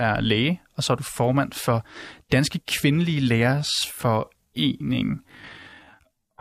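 From 3.41 s to the end of the speech, a time-stretched section plays at about 0.59 times the original pace while the pitch stays unchanged, so the delivery suddenly drags. This is likely software lengthening the audio by repeating short pieces rather than resampling.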